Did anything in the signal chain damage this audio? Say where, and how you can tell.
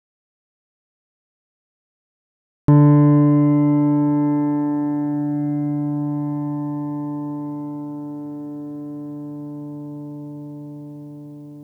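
Yes. An audio dropout to silence runs from the very start to 2.68 s. That stretch is silence with no room tone, unlike a gate or a quiet lead-in, before sound arrives mid-flow. The likely cause is a lost input link or mute at the capture stage while the recorder kept writing silence.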